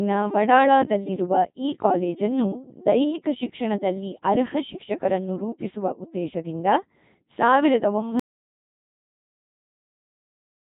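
From the start, the speech has the robotic, buzzy quality of the Codec 2 vocoder, with heavy damage consistent with its 2.4 kbit/s mode. Only pitch, voicing, energy and a coarse spectral envelope survive, and the decoder rebuilds the voice from sine waves. Nothing remains above 3.8 kHz. At 8.2 s there is an audio dropout to silence lasting to the end of the clip. The signal cuts to silence with no room tone, likely because the input was lost while recording continued.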